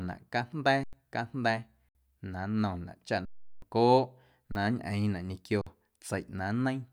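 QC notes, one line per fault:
0.84–0.93 s, 1.89–1.95 s, 3.25–3.62 s, 4.52–4.55 s, 5.61–5.67 s, underrun with held sample: the output buffer runs dry and the speech freezes flat for 30 to 370 ms, with little or no click at the onset. Each restart comes after a similar stretch of live audio was skipped. A dropout to zero would click at the onset as well.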